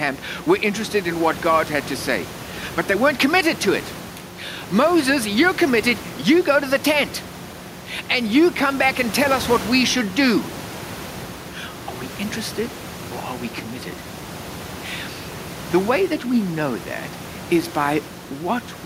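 The speech recording shows no technical faults, with only the room's own background noise audible at about 17 dB below the speech.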